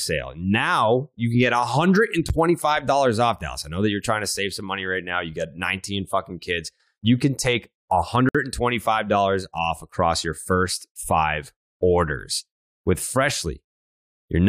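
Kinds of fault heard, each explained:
Gap between stream segments: consecutive segment timestamps fail to meet, so the player pads the gap with silence. The speech breaks twice, six seconds apart, with hard-edged holes: about 10 ms at 2.29 s, and 58 ms at 8.29 s right after "can take".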